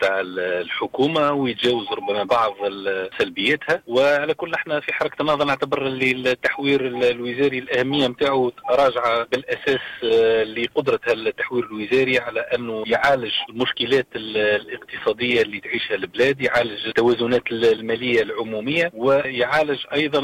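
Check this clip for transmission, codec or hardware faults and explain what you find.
Hard clipping runs throughout the clip. The signal is driven about 5 dB past what a stage in the chain can pass, so roughly one percent of samples hit the ceiling and are cut flat. Those squared-off peaks add high harmonics, heard as crackle on the loudest moments.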